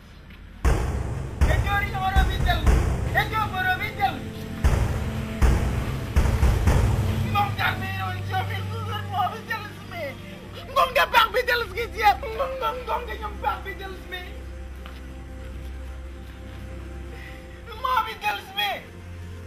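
Around 8.90 to 8.92 s there's a repeated buffer: new audio didn't turn up in time, so the same slice of roughly 10.7 ms got played twice more, which fits a 512-sample buffer. With pieces that short it comes across as a quick buzzy click rather than a real stutter, and about 20 ms of audio goes missing. The same thing happens with a single extra repeat at 10.73 s and 18.30 s, each a brief click losing around 10 ms.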